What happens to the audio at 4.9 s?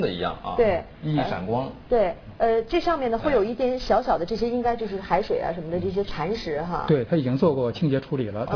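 At 4.9 s, as throughout the whole clip, the audio shows aliasing: its sample rate was cut without an anti-aliasing filter, which fits a drop from 48 kHz to 11 kHz. Everything above the 5.5 kHz fold point is mirrored back down as false, unrelated frequencies, sitting roughly 25 dB under the wanted sound. The high end turns gritty and metallic, and the spectrum runs densely right up to the 5.5 kHz edge.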